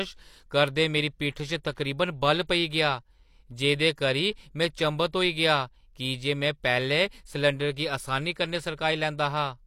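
A speech clip with one pre-echo at 1.63 s. A short burst of hiss, about 13 ms long, arrives just before a sharp attack, which sounds soft and smeared. A transform codec spread noise meant for the loud onset across its whole block, including the quiet moment before it.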